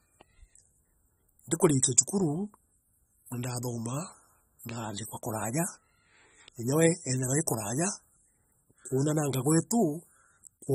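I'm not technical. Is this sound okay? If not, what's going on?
No. The speech sounds dull and smeared from start to finish. Hissy sounds like s have a fizzy, warbling edge. This is AAC compression damage, likely from saving the file at too low a quality. Everything above 15.5 kHz is gone.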